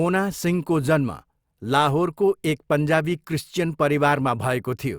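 No technical faults can be heard anywhere in the speech.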